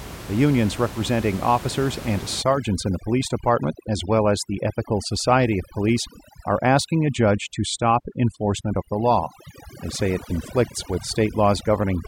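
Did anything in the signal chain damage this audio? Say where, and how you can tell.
Yes. The damage comes from call processing, through overdone noise removal. It starts at 2.42 s, just after "unions representing officers and", and lasts to the end of the clip. The room noise, about 15 dB below the speech, then drops and breaks up into twinkling specks. The suppressor is set too hard. It cuts any frequency band near its noise estimate, and quiet parts of the speech go with it.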